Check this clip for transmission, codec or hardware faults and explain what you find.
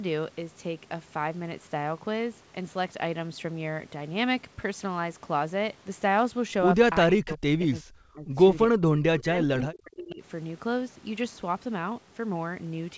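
Two faults stand out, both in the middle of the clip: the speech is repeatedly turned down during double talk, and a faint delayed echo slips through once. The band stops at 8 kHz throughout, which fits the G.722 wideband path this call appears to use.

Speech suppressed in double talk occurs from 7.15 to 8.38 s, 8.68 to 8.89 s and 9.17 to 10.22 s. The level drops by as much as about 40 dB in the first two stretches and about 35 dB in the third, so the speech fades and breaks into pieces. The likely cause is an echo canceller that could not tell the near talker from loudspeaker echo during double talk and suppressed both. On a waveform the envelope collapses in these windows, and a spectrogram shows the speech bands going dark.

An echo leak appears as a brief scrap at 7.32 s, a copy of earlier speech arriving 375 ms late at about 25 dB below the main voice. It likely comes from the far end's loudspeaker sound being picked up by its microphone and not fully cancelled before being sent back. 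It sounds like a faint ghost of the voice. A spectrogram shows a weak repeat of an earlier harmonic pattern, shifted by 375 ms, and it is too quiet to stand out on the waveform.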